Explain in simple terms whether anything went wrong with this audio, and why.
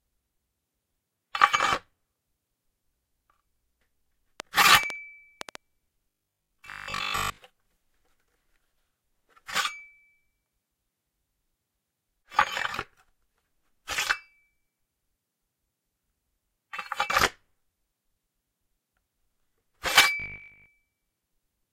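Between 4.40 and 5.56 s there is a train of clicks: about seven sharp ticks, roughly five per second at an uneven pace, sitting on top of the sound. They are likely caused by electrical interference from nearby equipment or a faulty connection or power supply.

At 6.10 to 7.38 s and again at 20.20 to 20.68 s, the audio turns into a stiff, metallic 50 Hz buzz. This is robotic sound from repeated short buffers. Fresh audio was likely arriving too slowly, so the system kept replaying the last 20 ms chunk. Most of the real audio in those stretches was skipped.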